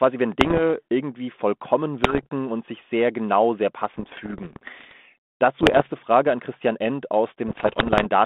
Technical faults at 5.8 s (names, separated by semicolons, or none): bit errors on an ADPCM link